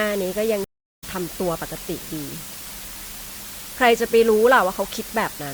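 From start to finish the speech carries low bit depth with dither: with only 6 bits, the dithered rounding error becomes a steady, even hiss about 15 dB below the signal, without distortion. A spectrogram shows a flat broadband noise floor; the waveform stays a fuzzy band even in pauses.

At 0.64 s a stream reconnect breaks in. The player drops out, leaving about 0.38 s of silence, then a fresh decoder picks up the speech about a fifth of a second further on at 1.04 s, fading in briefly. The waveform shows a flat gap and the spectrogram a blank vertical strip.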